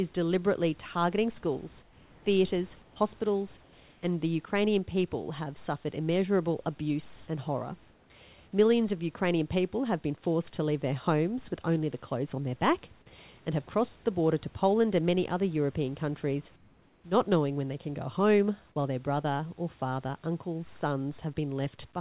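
Comfort noise replaces the background in six pauses: 1.82–2.26 s after "deliberately targeting schools", 2.82–2.96 s, 3.62–4.02 s before "and the", 7.16–7.28 s, 7.90–8.10 s, and 16.56–17.04 s before "not knowing when they". The likely cause is discontinuous transmission, with the receiver synthesising a smooth, featureless hiss, about 2–4 dB quieter (about 3 dB louder at 7.16 s). Unlike a dropout, the gap never falls silent. The noise simply loses the real room's texture.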